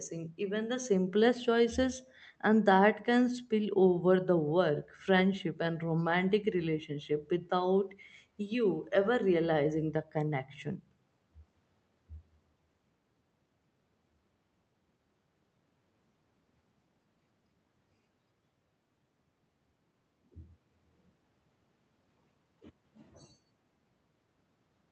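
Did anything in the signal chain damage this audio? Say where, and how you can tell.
No, nothing in the signal chain damaged this audio; the speech went through a call path whose codec limits the top end to about 8 kHz, which is normal for that path.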